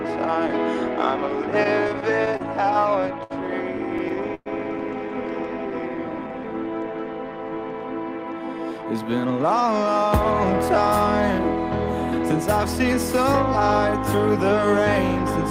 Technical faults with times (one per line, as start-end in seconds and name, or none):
1.63-3.32 repeated stalls (stutter)
3.98-4.48 repeated stalls (stutter)
5.58-6.33 jitter buffer slow-down
8.18-10.11 jitter buffer speed-up